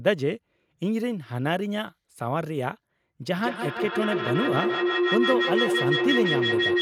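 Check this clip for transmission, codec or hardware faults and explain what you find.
One fault: a feedback howl starting at 3.37 s and running to the end of the clip. Two devices in the same room share the call, so the sound circles from loudspeaker to microphone and back, gaining level on each pass and narrowing to a tone near 400 Hz that pulses roughly every 150 ms. It peaks about 2 dB above the speech. Ordinary echo fades with each repeat, and mains hum holds a steady level, but this tone keeps building.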